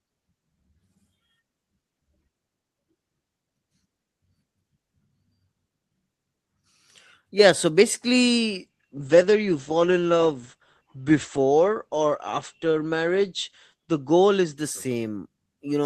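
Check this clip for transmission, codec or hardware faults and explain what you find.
One transmission fault is audible in this speech. From 8.64 s to 15.47 s, a call bitrate drop makes the voice turn rough and muffled, with the top end narrowing from 12 kHz to 8 kHz. The encoder was throttled, which fits a fall from about 32 to 10 kbps, held at its lowest for about 4.5 s, so coding becomes coarser and higher frequencies are discarded.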